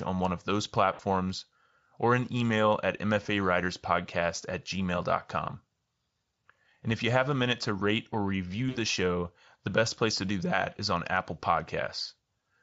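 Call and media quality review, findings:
VoIP packet loss concealed by the speech codec at 0.93–1.01 s after "on one of those", 3.23–3.27 s after "or an email at", and 8.69–8.77 s after "to rate or review", before "show the best place". The gaps point to roughly 60, 20 and 60 ms of lost packets. The Speex decoder extrapolates its last pitch and filter with decreasing gain, producing a stretched, fading tone or coloured noise that stays weak briefly after packets resume. On a spectrogram this shows as smeared, repeated spectral frames. On a waveform it shows as a decaying envelope. Audible Speex coding appears light.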